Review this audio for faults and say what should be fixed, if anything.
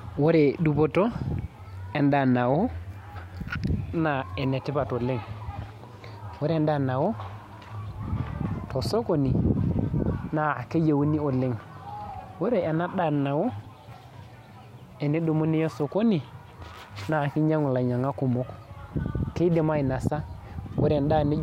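Clock slip clicks from 0.12 s to 21.39 s: faint ticks about every 70 ms, likely single samples slipping between unsynchronised clocks some 400 ppm apart. Lock both devices to a common word clock, or pass the stream through an asynchronous sample-rate converter.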